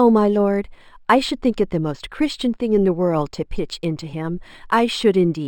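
A faint metallic shimmer rides on the sibilants throughout the speech, while the top of the band sounds dull and muffled. This is imaging from linear upsampling. The rate was raised by joining samples with straight lines, and that crude interpolation filters poorly. It rolls off the highs and leaves a mirrored copy of the spectrum between 6 and 12 kHz, about 30 dB down, which fits an original 12 kHz rate.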